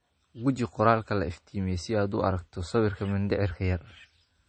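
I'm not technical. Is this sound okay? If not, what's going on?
No. Low-bitrate audio saved at a high bitrate affects the speech from start to finish. Nothing above about 8.4 kHz is left, so the voice sounds dull and muffled, missing the crisp edge on sounds like s and t. Most likely the recording was first squeezed into a small, heavily compressed file and later re-saved as a large, high-quality one. Re-saving cannot bring back the detail already thrown away, so the muffling remains.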